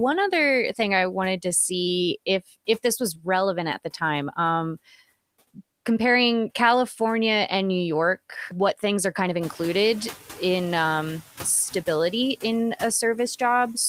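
A noise suppressor runs throughout this speech recording, cutting the steady background by about 17 dB frame by frame. These noise suppressor artifacts make the residual noise sink in the gaps and swell back under the talker. Between 2.67 and 3.26 s, after "wanted to see if" and before "at the time", the suppressor mistook parts of the speech for noise. This speech cut by the noise suppressor turns down roughly a tenth of a second of quiet sound by up to about 11 dB, so those fragments come out swallowed and faint. Around 9.5 s the room noise jumps by about 13 dB, though it stays about 19 dB below the speech. The suppressor's noise estimate lags this jump, so from 9.40 to 10.16 s, between "things are kind of" and "in um stability in", this noise suppressor catching up lets the louder background through with only about 6 dB of reduction. The noise then settles lower over those 760 ms as the estimate adapts.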